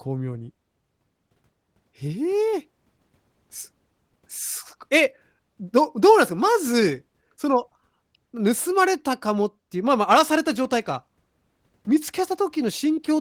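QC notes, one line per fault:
Nothing stood out on listening to this speech clip.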